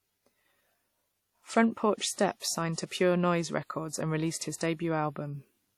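Speech with ringing, washy WMA compression throughout, likely a low-bitrate encode around 48 kbps; a spectrogram shows smeared, gappy detail and nothing above 20 kHz.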